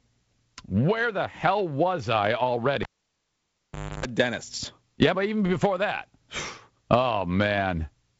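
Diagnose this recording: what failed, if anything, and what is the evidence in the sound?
A pop at 2.83 s cuts the speech to near silence for about 1.18 s, including a 50 Hz buzz lasting about 0.30 s, and another pop at 4.06 s. This is a cable pulled and plugged in: analogue wiring picking up mains hum while only the plug tip touches.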